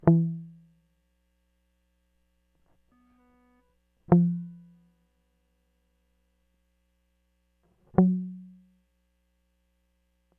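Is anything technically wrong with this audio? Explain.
No, nothing technically wrong can be heard in this music clip. There is no fault to point to anywhere in it.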